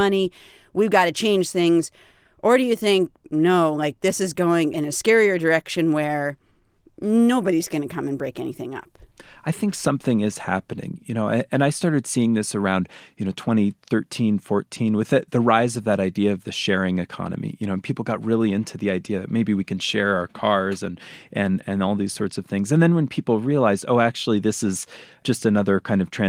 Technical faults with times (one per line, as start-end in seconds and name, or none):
none